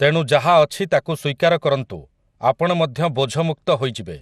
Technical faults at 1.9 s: MP2 compression

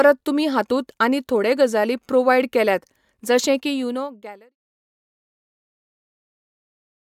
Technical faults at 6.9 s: none

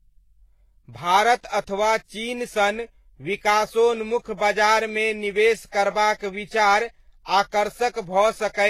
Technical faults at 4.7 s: transcoding between lossy codecs

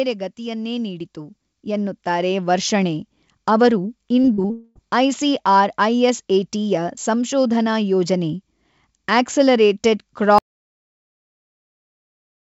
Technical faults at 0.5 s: automatic gain rising

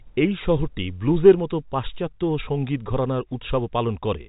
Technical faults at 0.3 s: none

